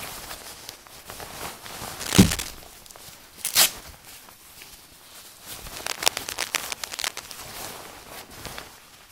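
From 1.92 to 2.50 s a burst of scratchy, rustling noise sits somewhat above the audio, and from 5.76 to 7.35 s a longer stretch returns at about the same level as the audio. This is cable scratch noise, likely from a worn cable, connector or control being moved so its contact resistance jumps around. Unlike evenly spaced clicks or steady hiss, it is dense and irregular, arriving in gritty clusters.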